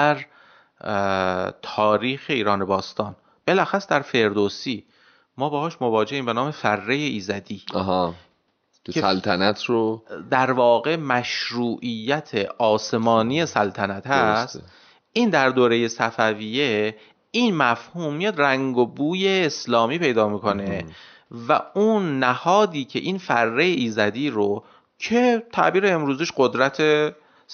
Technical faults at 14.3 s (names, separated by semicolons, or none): none